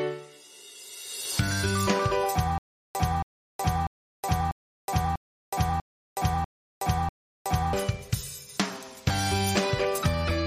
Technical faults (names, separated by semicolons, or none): stutter with silent gaps